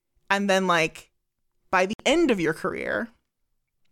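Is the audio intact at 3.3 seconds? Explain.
Yes, at 3.3 seconds the speech plays through cleanly, with no dropout, click, distortion or other fault audible at that point.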